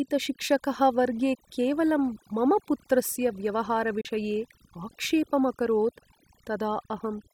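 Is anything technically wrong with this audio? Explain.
Yes. Throughout, the speech sits over a near-silent background with twinkling specks. This is overdone noise removal: aggressive reduction cut bands near the noise estimate, taking quiet speech detail with them.

From 4.01 to 4.06 s, the sound fades quickly, in about 8 ms, into a brief hole. This is a digital broadcast dropout: the receiver muted while data was missing, and the roughly 32 ms gap fits a single lost frame.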